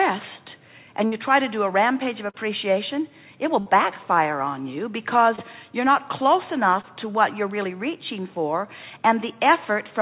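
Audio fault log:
1.06–1.14 s and 3.60–3.68 s, burst of packet loss: the last sound is held and fades for about 60 ms, then the audio jumps ahead. Late or lost packets left a gap the receiver filled by continuing the previous sound, and about 60 ms of the original audio is gone.
2.30–2.36 s, 5.36–5.39 s and 6.81–6.85 s, short concealed packet loss: each is a brief smear before the audio blends back in. Missing packets were bridged by extending the preceding sound, for 38 ms at 2.30 s and under 20 ms at the other two, with about 40 ms and 20 ms of original audio lost. The bridging is heard within the narrowband call audio, which has nothing above 4 kHz.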